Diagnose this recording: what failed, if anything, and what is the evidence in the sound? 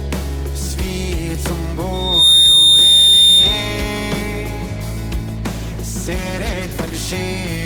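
Two failures are audible, one in the acoustic path and one in call processing and the codec.

From 1.93 s to 3.87 s there is a loudspeaker feedback squeal at 3.6 kHz. It comes from the acoustic loop between microphone and loudspeaker, where gain at that one frequency exceeded unity and the tone reinforced itself. It swells over roughly a third of a second to sit around 10 dB above the program sound. A spectrogram would show a single bright horizontal line at 3.6 kHz, and the waveform envelope would rise visibly, then end at 3.87 s.

From 5.37 s to 6.99 s the audio turns rough and muffled, consistent with a call bitrate drop. A falling bandwidth estimate pushed the encoder to a much lower rate, and the sound fits a fall from around 40 kbps to about 13 kbps, holding at the lowest quality for about 1.55 s. The coarser quantisation gives a watery texture, and the encoder's low-rate bandwidth limit removes the top end. 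On a spectrogram, energy above a few kHz is sharply cut off across that span before full bandwidth returns.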